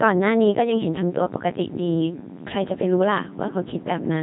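Throughout, the speech sounds robotic and buzzy, with nothing above 3.8 kHz: a Codec 2 vocoder at 2.4 kbit/s resynthesised it from pitch and envelope, discarding the waveform.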